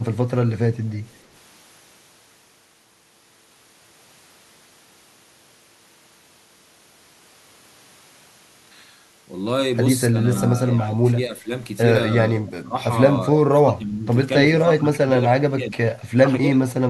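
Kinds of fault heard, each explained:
echo leak: at 1.11 to 1.25 s a faint copy of the speech returns about 276 ms late, very low, likely loudspeaker pickup the far-end canceller missed.
speech suppressed in double talk: from 10.09 to 16.6 s the speech repeatedly dips by up to about 25 dB, likely a canceller turning down its own talker along with the loudspeaker echo.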